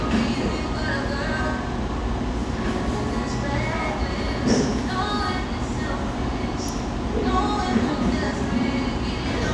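No faults detected anywhere in the audio.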